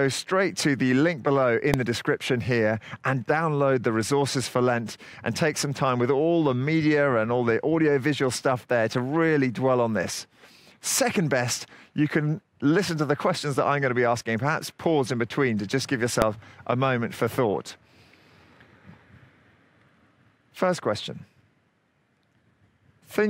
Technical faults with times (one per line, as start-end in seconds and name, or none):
1.74 invalid numbers at full scale
16.22 invalid numbers at full scale